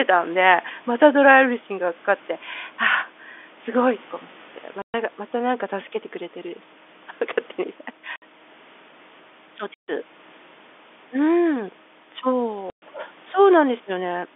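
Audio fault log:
4.82–4.94 s, 8.16–8.22 s, 9.74–9.88 s, 12.70–12.82 s: packet loss filled with silence. Gaps of 120, 60, 140 and 120 ms fit 20 ms packets, and they drop to dead silence with hard edges rather than smeared or repeated sound.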